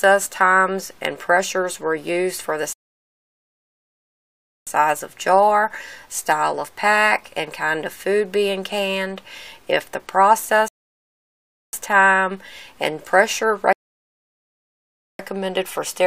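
Rebuffering stalls at 2.73 s (1.94 s), 10.68 s (1.05 s) and 13.73 s (1.46 s): playback starved, halted in silence, then resumed exactly where it stopped, unlike dropouts, which skip material.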